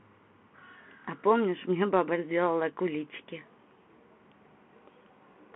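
Throughout the speech, a Bluetooth CVSD headset codec narrows the band to roughly 200 Hz to 3.4 kHz, with nothing above 3.8 kHz. Its one-bit up/down coding, consistent with a 64 kbps link, lags fast loud transients, roughening sibilants and leaving a granular hiss underneath.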